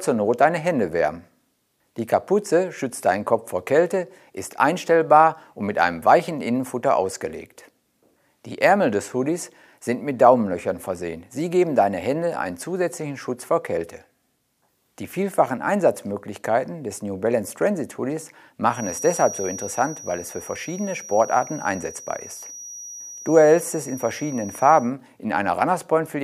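From 18.67 s to 24.95 s a thin 5.8 kHz feedback whistle sits well below the main sound, swelling and fading slowly in level. Unlike runaway howl it never builds, which points to a speaker-to-microphone loop likely hovering just at the edge of feedback.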